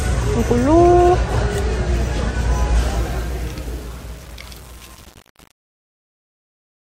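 From 2.80 s to the end of the clip, the fade-out, which begins around 2.8 s, carries truncation distortion. The gain stage producing the fade keeps too few bits and applies no dither, so as the level drops toward the smallest step the waveform collapses into a handful of coarse square steps. The coarseness fits a stage holding only about 7 bits. The quiet tail turns gritty instead of thinning out cleanly.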